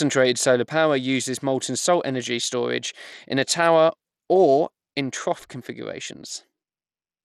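Speech throughout shows plainly audible Bluetooth SBC compression damage: flickering, dropped-out treble and gritty quantisation noise, likely from a starved bit pool consistent with roughly 96 kbps.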